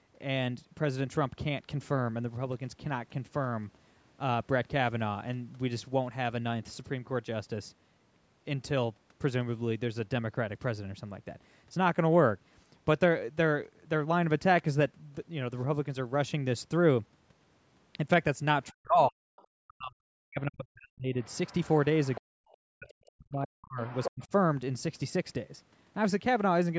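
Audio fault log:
18.71–21.14 s and 22.17–24.22 s, speech suppressed in double talk: The voice sinks hard while someone on the far end is talking too, bottoming out at around 40 dB down and losing roughly two seconds of itself in the first stretch and a second and a half in the second. That's likely the echo canceller failing to tell the near talker from the loudspeaker echo during overlap and clamping down on both.
19.37–19.44 s, 21.23–23.08 s and 23.87–24.27 s, other side's voice leaking through: A second voice sneaks into the mic. First there's a tiny scrap about 35 dB under the speech, then a longer stretch about 30 dB under, and finally a burst only about 5 dB below the talker, which is hard to miss. This is likely loudspeaker playback the echo canceller didn't fully strip out, so the far end bleeds through.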